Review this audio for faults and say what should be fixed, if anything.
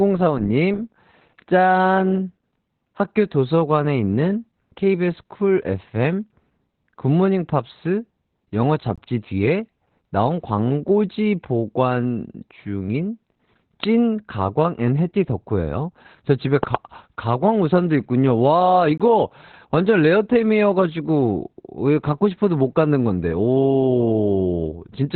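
The whole clip carries heavy Opus voice compression: the speech sounds muffled, hoarse and slightly robotic, with nothing above about 4.3 kHz. That fits SILK-mode narrowband coding at around 8 kbps, where the coder drops the upper band and quantizes the excitation coarsely. Encoding at a higher bitrate, or from the original source, would prevent it.

There are two gaps between chunks, at 8.96 s and 18.98 s. Each is a 20 ms hole, and the two sit 10 s apart, which points to 10 s chunks joined with silence from padding or late playback starts. Trimming codec padding and scheduling chunks back to back would prevent it.

A loud pop sits on top of the speech at 13.84 s, and a double pop follows at 16.63–16.77 s. Both peak about 15 dB above the signal, and the speech continues underneath. They are likely voltage spikes from a plug, a switch or static discharge. Securing connections and grounding the equipment would prevent them.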